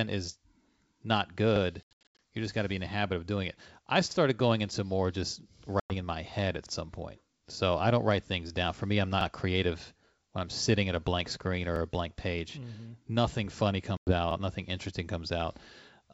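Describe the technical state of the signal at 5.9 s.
Packet loss on an ADPCM call spans 5.80 to 5.94 s: about 100 ms of audio, a handful of packets, is replaced by hard-edged silence, and the G.722 decoder's predictor then resumes out of step.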